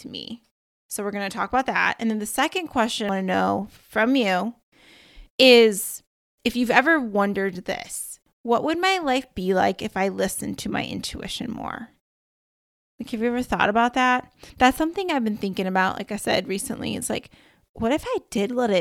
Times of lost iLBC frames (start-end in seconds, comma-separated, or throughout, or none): none